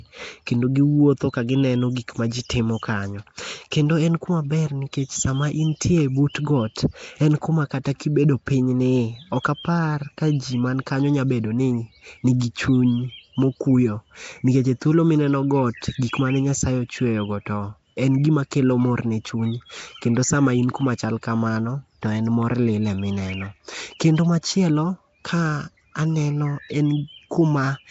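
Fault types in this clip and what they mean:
Nellymoser compression: The whole speech track has a rough, hissy halo and a smeared, underwater quality, and nothing is present above 7.7 kHz. The damage is plainly audible, which fits a low bitrate around 32 kbps and is likely the work of the old Flash microphone codec Nellymoser Asao. Its fixed two bits a sample leave weak bands empty and fill them with noise. That noise tracks the signal, which sets it apart from steady background hiss, and the gurgly smearing sets it apart from simple lowpass filtering.
pre-echo: At 12.40 s, just before "chuny mokuyo", a brief hiss of about 15 ms runs ahead of a sharp onset, and the attack itself sounds softened. The transform codec spread the noise meant for the loud attack across the quiet moment before it within the same block. Because the hiss comes before the onset and fades into it, it differs from a click or dropout. 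Those are abrupt, while this hiss anticipates the sound.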